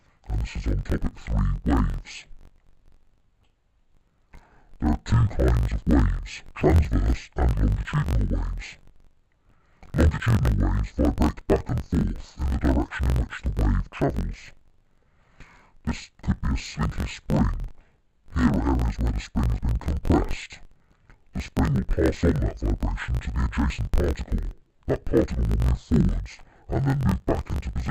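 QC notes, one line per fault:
Throughout: interleaved audio read as planar, an octave low yet at normal pace, doubled and choppy at about 47 Hz, which fits 1024-sample blocks of roughly 21 ms.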